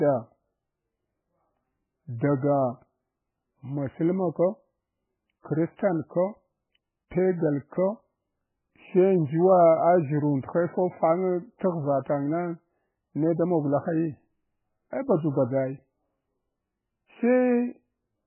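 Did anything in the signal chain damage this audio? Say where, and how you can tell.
Yes, at the codec stage. The whole clip is dull and watery, with nothing above 3 kHz and heavy swirling where weak detail flickers in and out. That's likely MP3 compression starved of bits, which fits a very low rate of around 8 kbps.

There's also pre-echo at 11.59 s, a short hiss about 17 ms long just ahead of a sharp attack that then lands soft. The codec smeared that loud attack's quantisation noise back across the quiet start of its block.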